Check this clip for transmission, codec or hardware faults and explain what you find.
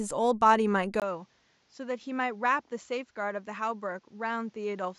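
One fault is present. From 1.0 s to the end, the speech turns duller and quieter, dropping about 10 dB after a 20 ms gap, with nothing above 7.6 kHz and a faint new noise floor. This points to an input switched to a poorer device, likely another microphone with narrower bandwidth.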